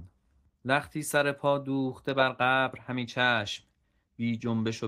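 On listening, nothing in the speech stood out as a technical fault.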